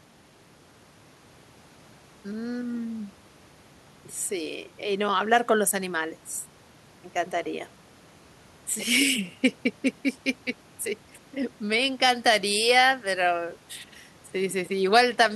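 No technical faults can be heard anywhere in the speech. At no point does anything break in or interrupt the recording.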